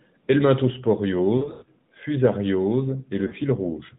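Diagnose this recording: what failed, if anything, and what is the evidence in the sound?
Network stage, lost AMR speech frames: drawn-out, fading gaps at 1.38 to 1.68 s with runs up to 100 ms, and a brief warble at 3.28 to 3.34 s.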